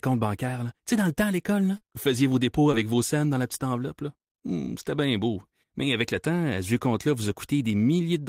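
Short concealed packet loss occurs twice: about 40 ms of audio arrived too late at 1.77–1.86 s, after "le temps à l'école", and about 20 ms at 2.72–2.85 s, after "vous faisiez vos dépôts". The receiver extended the preceding sound to fill each gap, leaving a brief smear before the speech resumes.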